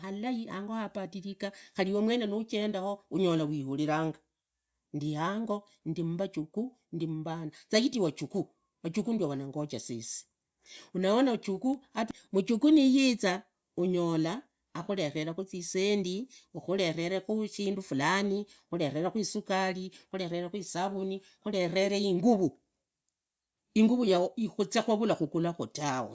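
Nothing stood out as a technical fault on listening to this speech recording.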